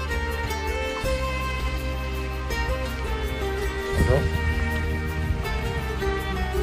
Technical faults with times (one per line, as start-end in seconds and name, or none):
none